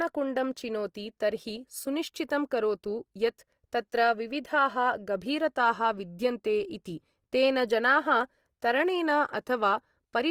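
Throughout the speech, the sound is rough and grainy, with noisy fizz where detail should be, yet bandwidth stays full to about 20.2 kHz. The likely cause is Opus compression in its music mode at a low rate, near 24 kbps, filling starved bands with noise rather than MP3's swirling holes.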